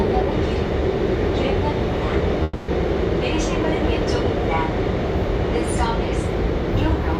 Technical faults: call audio freeze

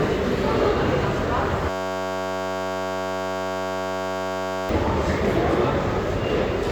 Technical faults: system hang loop

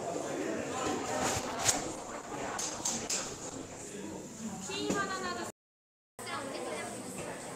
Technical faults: call bitrate drop; playback stall; catch-up at higher speed

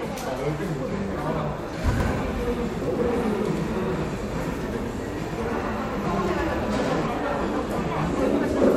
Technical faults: doubled audio track

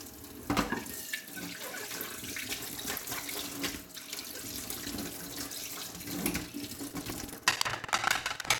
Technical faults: buffer tearing

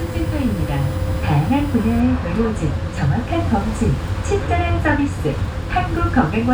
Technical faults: USB whine

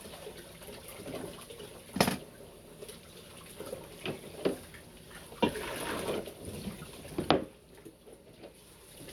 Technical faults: none

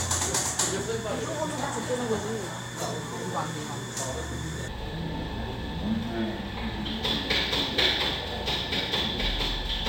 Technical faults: stereo read as mono

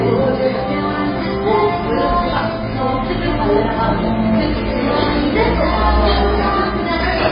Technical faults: MP3 compression; DC step

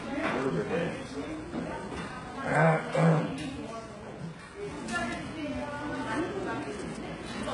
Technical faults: HE-AAC compression

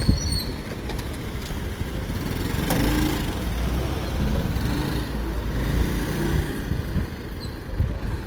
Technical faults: Opus compression

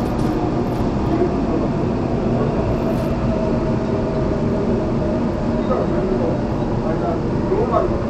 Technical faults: Bluetooth SBC compression

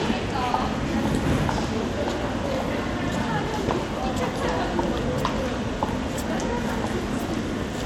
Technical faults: none

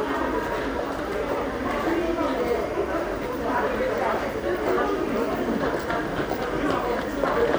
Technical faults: timecode bleed

